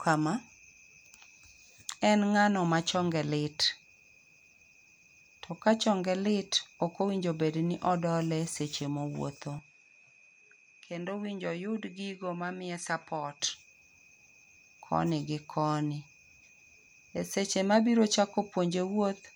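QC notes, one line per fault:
9.59 to 13.40 s, input switched to a poorer device: the speech suddenly loses its top end, with nothing above about 11.2 kHz, drops roughly 5 dB in level, and picks up a faint new noise floor sitting well below the voice. There's no gap at either switch point; the tone just changes and then snaps back at 13.40 s. That pattern is likely the recording hopping to a different, narrower-band microphone for those few seconds and then returning.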